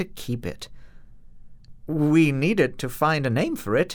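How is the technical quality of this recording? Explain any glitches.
No audible glitches or faults.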